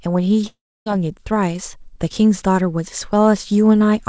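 From 0.48 to 0.87 s the speech breaks off into a fading buzz, followed by 0.29 s of near silence. It then resumes with 0.38 s gone, likely a long network dropout. Unlike a stall, nothing is delayed or replayed, and the lost stretch never returns.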